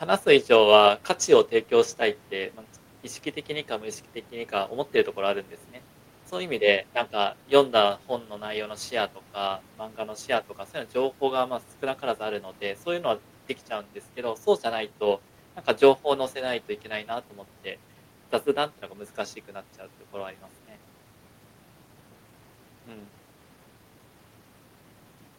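No technical faults are audible.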